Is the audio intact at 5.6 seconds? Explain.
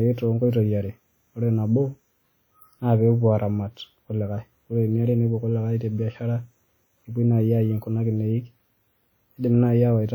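No, at 5.6 s the speech carries the plainly audible smearing heard throughout, likely WMA compression, fitting about 48 kbps. Long transform blocks spread noise around each sound, leaving ringing and a signal-following hiss. Unlike a band-limited codec, content still reaches 20.1 kHz.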